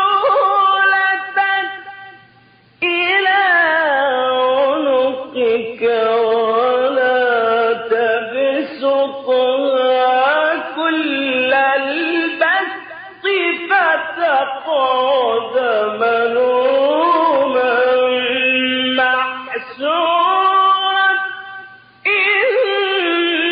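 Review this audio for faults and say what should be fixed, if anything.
No faults; nothing to fix.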